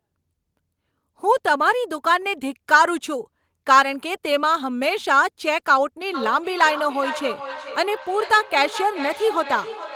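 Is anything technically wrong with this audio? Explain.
Yes. Feedback echo between two devices runs from 6.14 s to the end. A second device in the room plays back this microphone's audio, which is picked up again, and neither echo canceller removes the other's output. The speech comes back roughly every 400 ms, at its loudest about 12 dB below the original.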